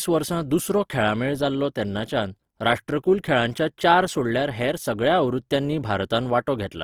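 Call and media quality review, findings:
Opus compression artefacts, entire clip. Grainy, rough, noisy texture on speech, plainly audible; full bandwidth retained. Likely cause: Opus CELT mode at a low rate, consistent with about 24 kbps. Bit-starved bands refilled with noise or folded lower-band content.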